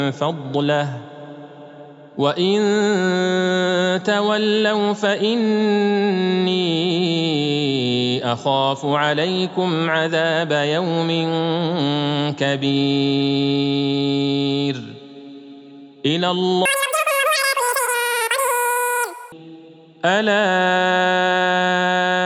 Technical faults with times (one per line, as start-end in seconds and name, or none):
16.65-19.32 wrong sample rate